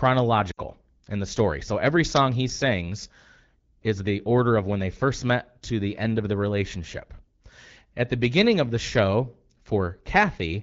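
Lost AMR speech frames at 0.51 to 0.60 s in this speech clip make a short gap where the sound drops to near silence before recovering. Corrupted radio frames failed their checks, so the decoder kept repeating the last good pitch and vocal-tract settings while turning the gain down. The damage spans about 60 ms, which fits three consecutive 20 ms frames, and the sound resumes briefly weak or rough. Around it, the AMR wideband codec at 12.65 kbit/s gives clear, lightly coded speech.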